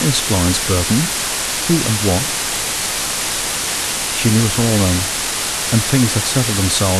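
From start to finish the speech sits in low bit depth with dither: only 3 bits, with random noise added before rounding, so the error becomes a steady, even hiss nearly as loud as the voice. Unlike undithered truncation, there is no gritty distortion following the speech.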